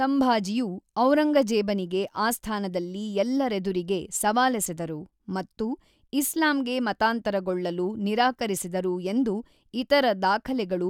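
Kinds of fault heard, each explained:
No kinds of fault are heard in this clip.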